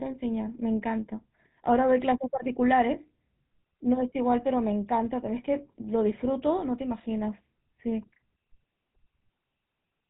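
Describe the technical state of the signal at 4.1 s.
At 4.1 s the speech carries GSM full-rate codec damage, present across the whole clip rather than just this moment. The coder rebuilds the voice from a vocal-tract model excited by sparse regular pulses at what sounds like 13 kbps. Nothing survives above 4 kHz, and the voice has a plainly audible buzzy, gravelly roughness.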